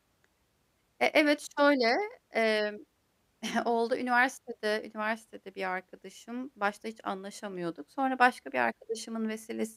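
No technical faults occur at any point in the audio, so there is nothing to describe in time order.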